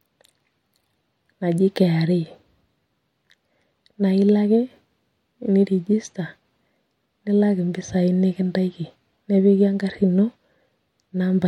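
No technical faults can be heard anywhere in the speech recording, and the signal stays steady and intact throughout.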